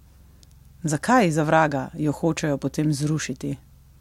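Nothing in this bit of speech sounds wrong at any point, so there's no technical fault to point to.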